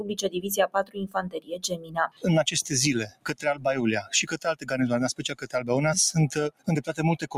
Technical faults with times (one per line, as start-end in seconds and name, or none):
0.00-7.38 noise suppressor applied to music or sounds
1.35-2.25 sound cut by the noise suppressor
3.08-3.65 sound cut by the noise suppressor
4.36-4.68 sound cut by the noise suppressor
5.21-5.51 sound cut by the noise suppressor
6.51-6.68 sound cut by the noise suppressor